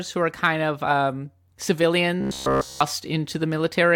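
A speech clip in which, from 2.21 s to 2.81 s, the voice collapses into a rigid, metallic buzz pitched at 66.8 Hz, still loosely tracking the words. This is robotic sound from repeated short buffers, likely caused by audio arriving too slowly, so the player loops the last fragment of about 15 ms (one cycle of that buzz) across essentially the whole stretch while the real audio is skipped.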